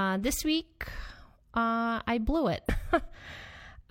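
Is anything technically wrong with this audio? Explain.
Yes. At 2.65 to 2.71 s, just after "uh I blew it", compressed frames are skipped. About two frames of roughly 46 ms each are dropped, so the speech jumps ahead by about a tenth of a second. On a spectrogram this shows as a vertical discontinuity, and the waveform shows an abrupt envelope change.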